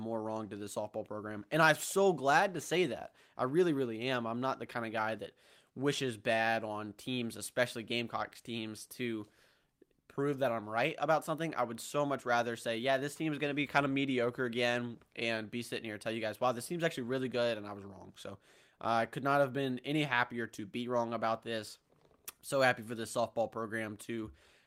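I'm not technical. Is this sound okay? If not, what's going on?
Yes, there's nothing wrong to hear in this recording.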